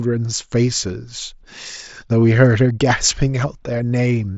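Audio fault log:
No faults heard in this speech recording.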